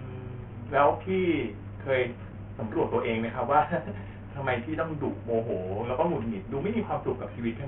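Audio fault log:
Throughout: Bluetooth SBC compression. The speech sounds dull and gritty, with the treble thinning out and flickering in and out, and a rough, grainy noise with aliasing riding on the speech. This is likely heavy SBC coding at a very low rate, in keeping with roughly 48 kbps. That leaves too few bits for the upper sub-bands, so they drop away, while the remaining bands are coarsely quantised into audible grit.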